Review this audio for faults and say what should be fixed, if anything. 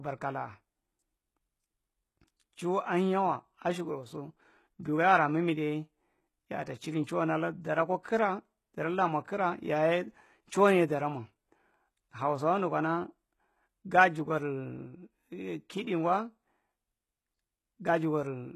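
The whole clip has a gritty, metallic top end, with s sounds going lispy and nothing at all above about 12.3 kHz. That's likely HE-AAC compression at a low bitrate, with the sound pointing to something around 16 kbps. The codec keeps only the lower band properly and rebuilds the treble by copying lower bands upward, so the harmonics up there don't line up with the real ones. To avoid it, encode at a higher bitrate or switch to plain AAC or a lossless format.

There's also a short pre-echo from about 8.03 to 8.05 s, right after "atta chiri nchuwan allan". A hiss smear roughly 23 ms long sits just ahead of a sharp attack. The transform codec spread its quantisation noise across the whole block, so noise sized for the loud onset leaked into the quiet moment before it, softening the attack. Giving the encoder more bits or turning on block switching for transients should prevent it.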